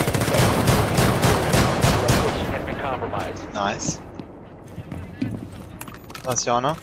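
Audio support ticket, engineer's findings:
Call bitrate drop, 1.86 to 4.03 s. Sound turns coarse and muffled, highs missing. Encoder starved after bandwidth estimate fell; fits a drop from 48 to 18 kbps.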